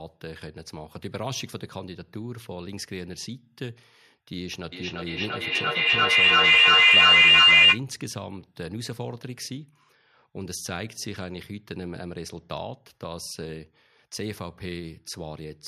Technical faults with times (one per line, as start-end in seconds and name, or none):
4.72-7.85 feedback howl